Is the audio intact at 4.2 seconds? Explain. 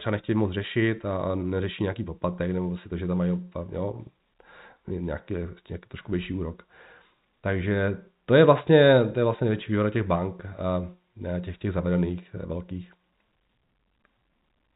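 Yes, the speech at 4.2 seconds is intact, with no dropout, click, distortion or other fault at that moment.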